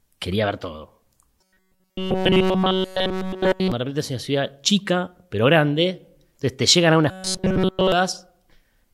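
Right after "quería ver todo", from 1.40 to 3.72 s, the speech collapses into robotic sound from repeated short buffers. It's a stiff, metallic buzz pinned at 188 Hz that only loosely tracks the words. It comes back from 7.11 to 7.92 s, just after "entonces te llegan algunas". The likely cause is starved playback looping a tiny chunk of about 5.3 ms while essentially all of the real audio gets skipped.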